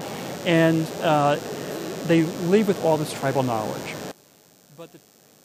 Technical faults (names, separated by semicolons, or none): DECT cordless phone buzz; one channel inverted